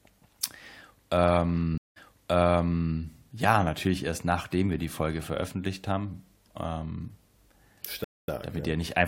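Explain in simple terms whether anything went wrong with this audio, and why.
Yes. At 1.78 s the speech drops out for 0.18 s, then picks up again, repeating roughly the last second. At 8.04 s a 0.23 s gap leads back in just 0.02 s earlier. Each is a stream reconnect: the connection broke, the player went quiet, reconnected and restarted its decoding partway through the stream, with the sound fading back in.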